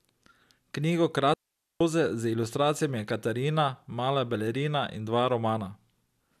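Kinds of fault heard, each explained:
Digital wireless dropout: the speech stops dead at 1.34 s and returns at 1.81 s, leaving a clean gap of near silence lasting about 0.47 s, with no crackle, hiss or burst of noise on either side. This happens when a digital radio link between transmitter and receiver loses too much data to rebuild the audio, so the receiver mutes its output with a very quick fade and restores the sound once the link recovers.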